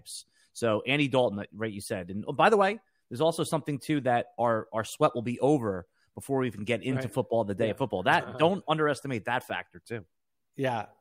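No technical faults can be heard anywhere in this speech recording.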